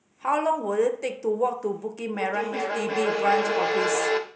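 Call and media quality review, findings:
Feedback howl, 2.14 s to end of clip. Sustained tone around 400 Hz swelling over the speech until it's about as loud as the talker, pulsing roughly every 0.4 s. Probable component: two call endpoints sharing one room, each mic picking up the other's loudspeaker. Loop gain above unity, so each pass round the mic-speaker-mic path returns louder, narrowing to the loop's favoured frequency; the pulse rate tracks the loop delay. Persists until the loop is broken, e.g. by muting one device.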